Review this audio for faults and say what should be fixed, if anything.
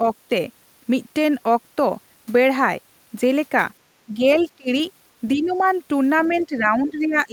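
Speech suppressed in double talk at 4.06–4.23 s, 4.45–4.70 s, 5.35–5.59 s and from 6.28 s to the end of the clip. The talker's level sags by about 10 to 15 dB in most of these, and by about 30 dB at 4.45–4.70 s, where it nearly vanishes. The likely cause is an echo canceller that could not tell near-end speech from loudspeaker echo while both sides spoke, and attenuated everything. A canceller with proper double-talk detection, or a headset, would prevent it.

Other side's voice leaking through at 6.19–6.43 s. A faint second voice sits about 25 dB below the talker, just as the final suppression begins. It is likely residual loudspeaker echo that the canceller failed to subtract from the microphone signal. Better echo-path modelling, lower loudspeaker volume or headphones on the talker's side would stop the leak.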